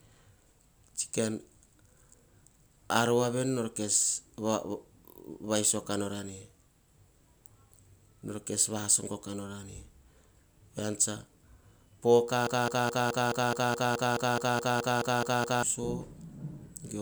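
A broken-record loop runs from 12.47 to 15.63 s. A single 212 ms fragment of the speech repeats exactly, back to back, 15 times, producing a rapid mechanical stutter at roughly five repeats per second. The likely cause is a stall in the player, encoder or stream that kept resending the last fragment it held. Whatever speech should have played during those three seconds is lost rather than delayed.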